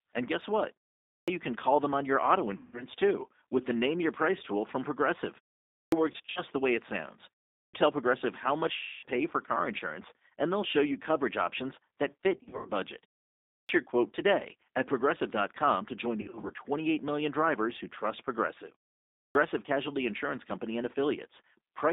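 G.729 codec damage runs through the whole 22 s of speech and is plainly audible. The sound is squeezed into a telephone band of roughly 250 Hz to 3.7 kHz and rebuilt at 8 kbit/s from a vocal tract filter, a pitch predictor and a few pulses per frame. The result is a rough, slightly synthetic voice with no air or sibilant sparkle above the band edge.

A clipped start after a pause comes at 1.13 s. The output path had gone idle during the preceding silence, here about 0.43 s, and took roughly 147 ms to wake again, so that much of the onset is swallowed and the sound begins abruptly.

VoIP packet loss concealed by the speech codec follows at 2.57 to 2.84 s. About 160 ms of audio is missing, which fits eight lost 20 ms packets. The decoder extrapolates from its last pitch and filter, so the sound smears into a buzzy tone or coloured noise that fades, and stays weak briefly after packets resume.

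Another clipped start lands at 5.79 s, with about 133 ms lost after a 0.47 s pause. Packet loss recurs at 6.12 to 6.41 s, where 120 ms is scattered across 240 ms with runs up to 60 ms.

A third clipped start at 7.6 s loses about 135 ms. The longest concealment, 260 ms, comes at 8.77 to 9.06 s, where the extrapolated sound fades as the gain drops.

Scattered loss returns at 12.37 to 12.69 s (180 ms lost over 280 ms, runs up to 80 ms). A clipped start follows at 13.55 s, losing about 141 ms after a 0.58 s pause. More scattered loss appears at 16.21 to 16.52 s (120 ms over 280 ms). A final clipped start at 19.2 s loses about 150 ms.

Across all five clipped starts, the output goes to sleep during the silent pauses beforehand.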